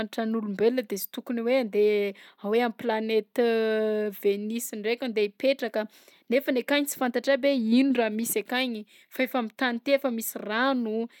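No technical faults can be heard anywhere in the speech.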